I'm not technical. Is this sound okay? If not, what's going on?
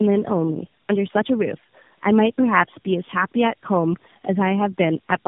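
No. The speech has tandem speech coding all the way through. It was squeezed by a phone speech coder three separate times, each working on the last one's damaged output, so it sounds muffled, rough and a bit warbly, with nothing above about 3.7 kHz.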